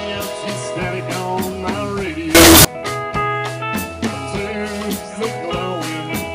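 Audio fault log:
2.35–2.65 s, float read as integer: a harsh, near-square burst at a nearly fixed, high level, with noise as loud as the sound and pitch still traceable, unlike clipping. Likely 32-bit float samples read as 32-bit integers.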